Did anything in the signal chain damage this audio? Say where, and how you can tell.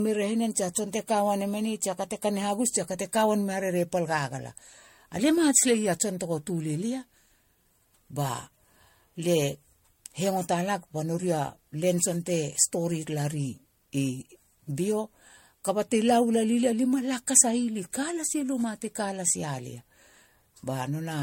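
Yes, at the codec stage: the speech was likely encoded and decoded several times over with MP3, causing generation loss. Throughout, there is nothing above 16.6 kHz, and it sounds swirly, hollow and smeared, with blurred attacks, more than a single pass at around 64 kbit/s would explain.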